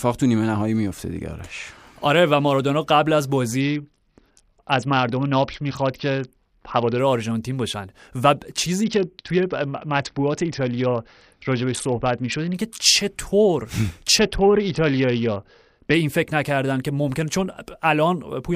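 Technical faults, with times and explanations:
3.61–6.99 s, 8.84–12.55 s and 14.18–15.94 s: Bluetooth SBC bit pool drop. In each span the speech loses its treble and takes on a gritty, granular noise, then returns to full clarity. The link was likely congested, so the encoder cut its bit budget, consistent with the bit pool falling from 31 to about 7, near 61 kbps. The upper sub-bands then get few or no bits, and the remaining bands are coarsely quantised.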